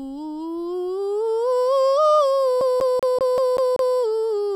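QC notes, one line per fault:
2.61–3.96 s, CD stuck on one turn: a 0.19 s slice of the music repeats seven times with a brief mute at each jump, as a scratch keeps throwing the laser back one track.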